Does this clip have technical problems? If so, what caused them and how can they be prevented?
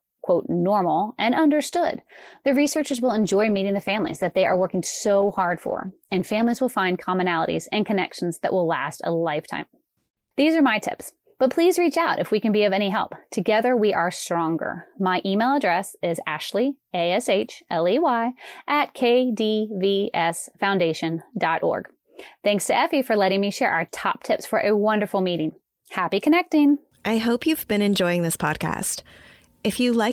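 Yes. A call bitrate drop runs from 1.7 to 6.73 s: the speech turns coarse and muffled, with the high end cut off, which fits the encoder being pushed from about 40 to about 15 kbps for nearly 5 s. Unlike packet loss, there are no gaps or glitches, just steady dulling until quality returns. To prevent it, keep the connection's bandwidth stable and avoid competing uploads so the encoder's bitrate stays up.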